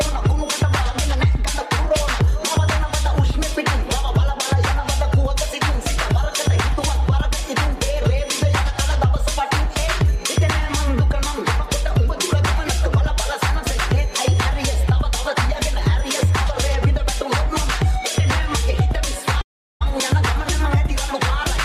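From 19.41 to 19.83 s the sound stops, the last moment smears into a fading buzz, then near silence, and it resumes with roughly 0.4 s missing. This is likely a long network dropout. Unlike a buffering stall, the lost part is never replayed.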